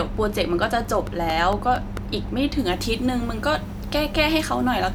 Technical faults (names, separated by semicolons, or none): train of clicks; pre-emphasis left on